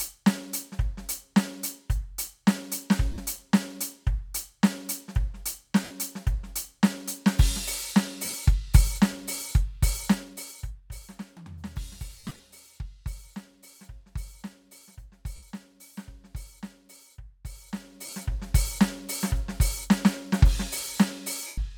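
In this music, lost LE Audio frames hit at 3.12, 5.84, 8.25, 12.18, 15.36, 18.06 and 21.47 s. Each time, the decoder recycles the last spectrum with scrambled phase, so the tones smear into a brief noisy wash before the music returns. The longest gap, at 12.18 s, loses about 140 ms spread over 0.21 s.

Zipper noise shows up at 10.01–11.15 s, as the level drops by roughly 20 dB, and again at 17.49–18.46 s, as it comes back up. The gain moves in 2 dB jumps with no smoothing, so each jump clicks, giving a fast ticking that rides on the fade.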